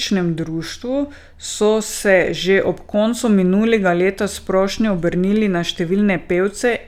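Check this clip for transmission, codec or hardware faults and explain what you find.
No faults detected.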